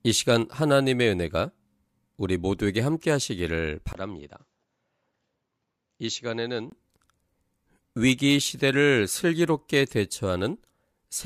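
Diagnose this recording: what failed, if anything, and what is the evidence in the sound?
The fault sits at the capture stage, at device selection in the driver. From 3.93 s to 6.72 s the speech turns duller, with nothing above about 7.6 kHz, and comes in roughly 5 dB quieter over a new, low noise floor around 50 dB under the speech. A 20 ms silence marks the switch. On a spectrogram the upper band goes empty in a hard-edged block, and the waveform steps down in level. This is likely the input switched to a poorer device, with the original restored at 6.72 s.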